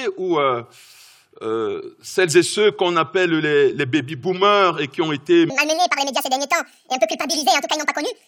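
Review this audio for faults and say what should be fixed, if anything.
From 5.5 s to the end, a section at the wrong speed runs 1.92 times fast, raising pitch about ten semitones, likely from playback against a mismatched clock. On a spectrogram, harmonics jump upward and spread apart at 5.5 s; the waveform looks squeezed in time. To fix and prevent it, play and export that section at the rate its source was recorded at.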